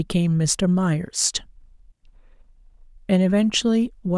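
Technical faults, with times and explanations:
Nothing in this bit of speech stands out as a technical fault, so there's nothing to list here.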